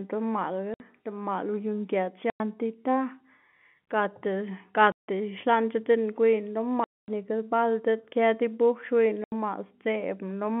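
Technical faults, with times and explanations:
0.74 to 9.32 s, packet loss filled with silence: the speech drops out dead at 0.74–0.80, 2.30–2.40, 4.92–5.07, 6.84–7.08 and 9.24–9.32 s. Those holes run 60, 100, 160, 240 and 80 ms, all multiples of 20 ms, which fits 20 ms packets going missing and the receiver simply playing nothing in their place. The abrupt cut in and out of the waveform gives each gap hard edges, heard against the narrow telephone band of the G.711 line.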